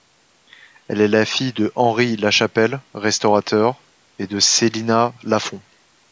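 No technical faults can be heard anywhere in this speech. The call microphone processing is audible as expected: the lowest bass is trimmed away and nothing sits above 8 kHz.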